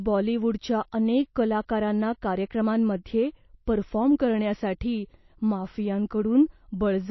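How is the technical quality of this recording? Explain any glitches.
Technical quality is poor, with plainly audible codec damage throughout the speech. The fault runs the full length of the clip. Nothing is present above 5.8 kHz, and the upper range carries a watery, swirling texture. This is likely MP3 compression at a very low bitrate, roughly 28 kbps. Short of bits, the encoder cuts everything above 5.8 kHz and drops weak frequency lines that flicker in and out between frames. This makes s sounds dull and metallic and smears consonant onsets.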